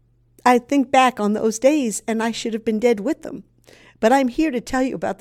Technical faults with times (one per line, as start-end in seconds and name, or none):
none